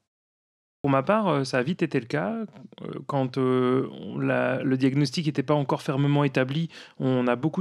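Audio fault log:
0.80–0.84 s, clipped start after a pause: after 0.8 s of silence the output device has gone to sleep and needs about 43 ms to wake and lock again, so that opening slice is swallowed and "ma part euh ça" bursts out of silence missing its first sounds.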